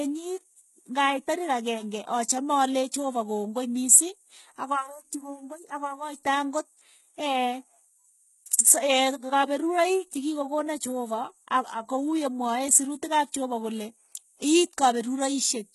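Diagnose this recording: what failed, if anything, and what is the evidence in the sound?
The fault sits at the codec stage and runs through the whole speech clip. The treble is bright but synthetic, and nothing survives above 11.8 kHz. S sounds come out gritty and lispy, with a metallic sheen. The damage is heavy, which fits a bitrate near 16 kbps. The likely cause is HE-AAC compression. Only the low band was truly coded. The top was rebuilt by copying lower bands upward, so its harmonics no longer line up.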